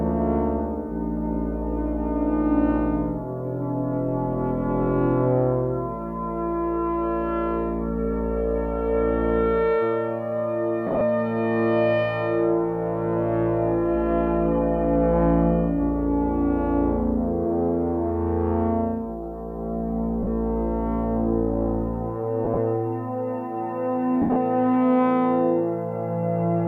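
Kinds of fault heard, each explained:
Lost LE Audio frames: dropped Bluetooth packets left gaps the LC3 decoder filled with a noisy, faded repeat of the previous spectrum, heard as brief smeared bursts from 10.87 s to 24.36 s.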